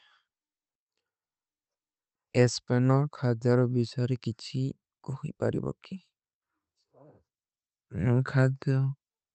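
No technical faults can be heard in this recording.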